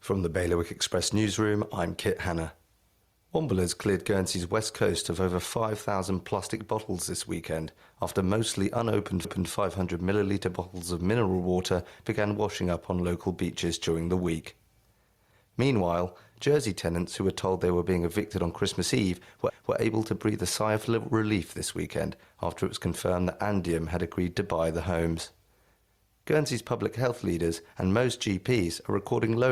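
Speech recorded with gain pumping throughout: the gain swings by about 5 dB as the limiter reacts to the talker, so the level seems to breathe and loud and quiet passages sit unnaturally close together. The likely cause is input gain set far too high, with a fast limiter or compressor clamping down on each loud syllable. There are also overlapping chunks at two joins spaced 10 s apart. Right after "weekend after mostly unopened", from 9.25 to 9.50 s, and again from 19.50 to 19.75 s, just before "able to breathe a", a 250 ms piece plays twice, heard as a click and a stutter. The audio was evidently handled in 10 s blocks, each starting a quarter second before the previous one ended. What separates this from a dropout or buffer underrun is that nothing goes missing and there is no gap of silence: material is repeated, and at a regular interval.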